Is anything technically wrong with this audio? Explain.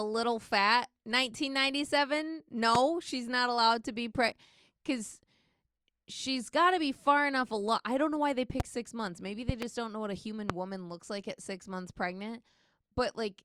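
Yes. A loud pop occurs four times in this speech, likely from a voltage spike such as a plug, switch or static discharge entering the signal chain. A single sharp pop arrives at 2.75 s, just before "she's not allowed to", roughly 20 dB above the speech. Another lands at 8.6 s, about 15 dB up. A double pop spans 9.49 to 9.65 s, between "six months maybe" and "don't know what a", also about 15 dB up. The last, at 10.5 s, falls between "know what a human" and "woman looks like at", again around 20 dB above the speech. In each case the speech continues underneath the pop.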